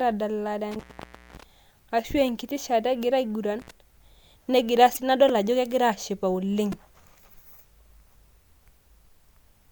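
From 0.72 to 1.43 s, intermittent contact drops the speech for about 550 ms, with crackle at both edges. A shorter opening, about 61 ms, hits 3.60 to 3.71 s.

From 4.93 to 4.97 s, damaged data in the compressed stream makes the decoder lose sync. It gives a brief glitch as the decoder searches for the next frame.

At 5.29 s and 6.72 s, a repeated buffer plays a 2.9 ms slice again, twice then four times. That fits a 128-sample buffer. Each is a short buzzy click, with essentially no audio lost.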